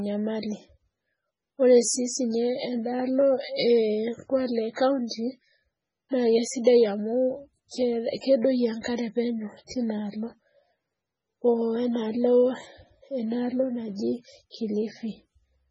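Throughout, the speech sounds watery and swirly, with nothing above 10.2 kHz. This is likely heavy MP3 compression, fitting a very low bitrate near 16 kbps. Pre-echo appears at 4.73–4.77 s, 5.07–5.11 s, 8.20–8.23 s and 9.67–9.71 s. Codec noise spreads ahead of sharp attacks, so brief hiss precedes each one and softens it.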